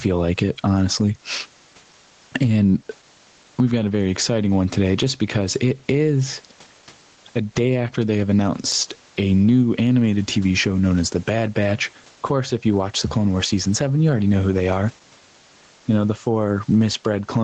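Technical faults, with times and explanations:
Throughout: gain pumping. The level is pulled down by around 10 dB on each loud moment of speech and rises again after it, squashing loud and soft passages closer together. The likely cause is input gain set far too high for the microphone, with a fast limiter or compressor clamping every loud sound. Unlike a noise gate, the gain moves with the loud moments themselves. The background sits about 44 dB below the speech, and nothing is heard above 8 kHz, which fits the call's codec band limit.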